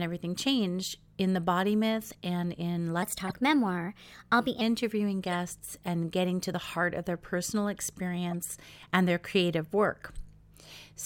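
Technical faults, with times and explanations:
3.03–4.61 s, section at the wrong speed: the speech runs 1.16 times too fast, so pitch rises by about three semitones and the delivery sounds hurried. Speed and pitch shift together, which likely means this stretch was played against the wrong clock.
3.27–3.35 s, 5.27–5.35 s and 8.31–8.33 s, corrupt frame decoded: short chirpy bursts peaking around -20 to -25 dBFS. Damaged bits in a few compressed frames were decoded anyway, placing energy at wrong frequencies for each damaged frame's length.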